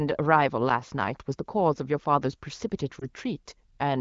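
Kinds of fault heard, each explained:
Lost AMR speech frames: near 3.0 s one 20 ms speech frame fails and the wideband decoder rebuilds it from the previous pitch and vocal tract settings at reduced gain, giving a brief dip or warble rather than the hard silence or click of a raw dropout.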